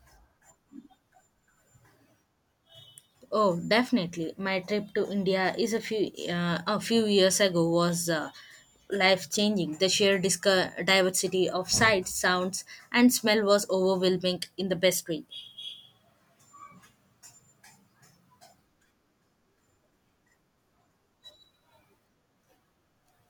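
No technical faults can be heard anywhere in the recording.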